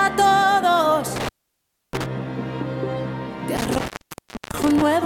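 Intermittent contact drops the sound twice, from 1.16 to 2.06 s and from 3.57 to 4.82 s, with the line open for about 0.65 s and 0.63 s. A loose connection briefly breaks, so crackle brackets each gap of faint hiss. The waveform collapses to near-flat, with spiky edges, and the spectrogram shows a dark band framed by vertical broadband streaks.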